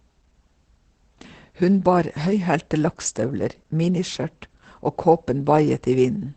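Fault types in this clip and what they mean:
Opus voice compression: The speech sounds muffled, hoarse and faintly robotic throughout, with nothing heard above 8.9 kHz. The codec narrows the band to wideband and its SILK linear-prediction coder renders the excitation coarsely, which fits a low rate of around 12 kbps.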